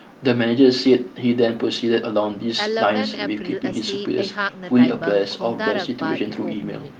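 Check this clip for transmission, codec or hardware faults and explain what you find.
No transmission, codec or hardware faults found here.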